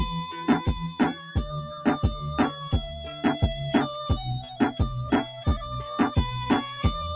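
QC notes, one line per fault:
Throughout: noise suppressor applied to music or sounds. A speech-tuned noise suppressor stays active on this non-speech audio. It treats steady tones, ambience and decay tails as noise and keeps pulling them down. Onsets pass while sustained parts sink, so the level swings by around 10 dB and the sound pumps and thins. Everything sits below 4 kHz, which fits a narrowband G.711 mu-law call path.
1.17–1.34 s, 2.52–2.68 s, 5.28–5.44 s: sound cut by the noise suppressor. In each window the suppressor judges the sound to be noise and ducks it harder than its surroundings. Each dip lasts roughly 150 ms. The deepest drop is about 7 dB at the first, and about 5 dB at the second and third. The held or fading material sinks and its decay ends early. The result is a brief dip in level.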